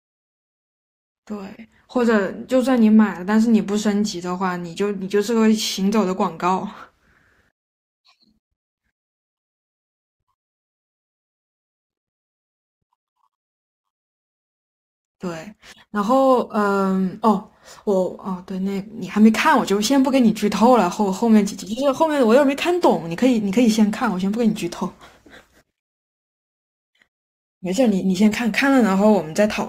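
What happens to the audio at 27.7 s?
At 27.7 s the speech carries crude rate conversion, running from 9.11 s to the end. Samples are repeated with no filtering, which fits a 44.1 kHz to 48 kHz change. The error sits roughly 30 dB down. It sounds like a gritty, inharmonic fizz.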